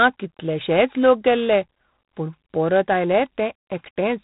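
Throughout, G.726 ADPCM coding limits the speech. Nothing passes above 3.8 kHz. A harsh, rasping hiss tracks its level, which fits 24 kbit/s.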